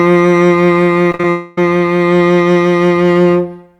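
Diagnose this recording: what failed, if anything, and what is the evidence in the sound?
The network failed first between 1.10 and 1.24 s, with repeated packet loss (robotic sound). The music turns choppy there. Four separate holes open in that short stretch, the longest about 45 ms. The receiver patches each one by stretching the last sound it had, about 90 ms in all. That covers roughly two-thirds of the span, so the music keeps stuttering instead of flowing.

From 1.30 to 1.58 s the music is replaced outright. For about 270 ms a continued, smeared version of the last sound plays in its place, and it never drops to silence. When the music returns, that stretch is simply gone. The stage is the network. The likely cause is a long network dropout, where nothing arrived and the concealment filled the whole gap on its own.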